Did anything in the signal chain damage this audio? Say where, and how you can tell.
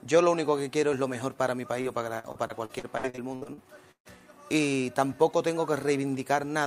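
Yes. Repeated packet loss (robotic sound) damaged the audio at the network stage, from 1.81 to 4.07 s. Across that stretch there are 13 separate holes, the longest 137 ms. Roughly a quarter of the span is patched by stretching the last good sound forward, and a similar amount simply drops out, so the audio turns choppy. On a spectrogram this shows as repeated flat, smeared frames alternating with abrupt blank slices, and the waveform shows matching repeated cycles and gaps.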